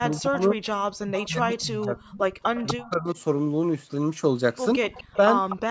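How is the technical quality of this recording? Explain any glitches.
The recording has two recurring call faults: the speech repeatedly ducks in level, and delayed repeats of it leak back in. The audio also stops at about 8 kHz, as expected from call microphone processing.

Speech suppressed in double talk affects 0.0 to 0.62 s, 1.05 to 2.2 s and 2.71 to 3.17 s. The speech sinks by roughly 20 to 25 dB at its deepest, in pieces totalling about a second in the longest stretch. The likely cause is an echo canceller that heard both sides at once, could not separate them, and turned everything down. Unlike a dropout, the level sinks in pieces rather than going silent cleanly.

The echo leak is a copy of the speech trailing it by 244 ms. It appears at 0.16 to 0.2 s, 1.15 to 1.28 s, 2.42 to 2.89 s, 4.94 to 5.17 s and 5.49 to 5.57 s, ranging from about 30 dB down to only about 10 dB below the speech. 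It likely comes from a loudspeaker on one end whose canceller let some pickup through. The fixed delay and scrappy bursts set it apart from room reverberation, which would smear continuously.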